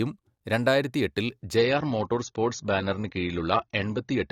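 At 1.57 s the speech abruptly loses its top end and stays that way to the end at 4.31 s. This is an adaptive stream at a lower bitrate: the player switched to a cheaper encoding without any gap. The dulled, swirly sound fits AAC falling from roughly 96 to 24 kbit/s. On a spectrogram, energy above 6.9 kHz disappears at a clean vertical edge. The waveform shows no break at the switch.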